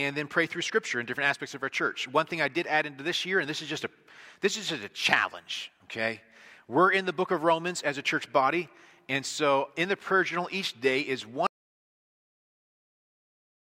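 At 11.47 s the sound just stops dead, and from there to the end of the clip, a bit over 2.1 s, there's nothing at all. It's an audio dropout to silence: not a fade, and no room tone or hiss underneath, just silence. That points to the input going away, likely a disconnected device, a dropped link or a mute, while the recorder kept writing. Whatever came after that point is gone.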